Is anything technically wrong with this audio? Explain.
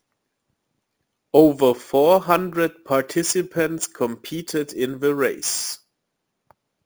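Yes. Throughout the speech, there is imaging from sample-and-hold upsampling, which fits a 16 kHz source raised to 44.1 kHz by repeating samples without smoothing. Mirrored copies fill 8 to 16 kHz at about 17 dB below the signal, adding a metallic fizz that tracks loudness and moves against the pitch.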